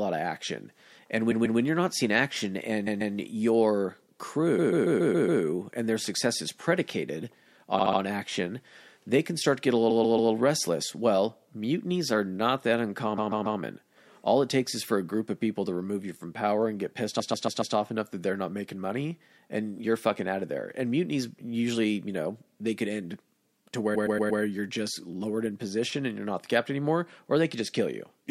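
Repeated frames stutter the speech eight times, at 1.30, 2.86, 4.58, 7.78, 9.89, 13.17, 17.19 and 23.94 s. Each time a short run of compressed frames is decoded again. Mostly a 139 ms block loops two to four extra times, with six at 4.58 s. The blocks are 70 ms at 7.78 s and 116 ms at 23.94 s. Every loop lengthens the audio, by 0.84 s at 4.58 s.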